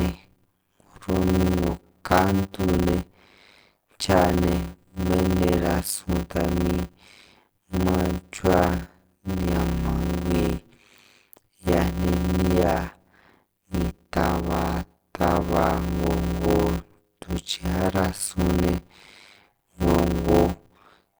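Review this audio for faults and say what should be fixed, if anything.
Block size mismatch (padded), throughout the clip: the speech carries a steady 100 Hz buzz and runs slow, at about 0.53 of its normal speed, while its timbre stays. One stage is handing over shorter blocks than the next stage consumes, which fits 256-sample blocks being written, and each block's shortfall is filled with silence. That brief gap, repeating once per block, is the buzz, and the added silence stretches the timeline. To prevent it, make both stages agree on the block size, or buffer the output so every block is filled completely before it is read.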